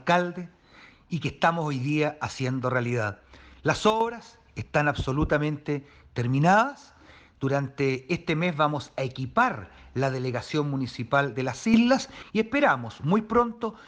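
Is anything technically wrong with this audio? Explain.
Yes. At 3.90 s the level drops abruptly by about 9 dB, staying down until 4.01 s, and at 11.74 s it leaps up by about 8 dB until 12.23 s, with the background noise shifting together with the sound. These are sudden gain jumps, likely from a digital gain setting applied instantly between samples with no ramp.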